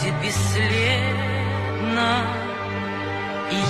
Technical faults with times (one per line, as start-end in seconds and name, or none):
none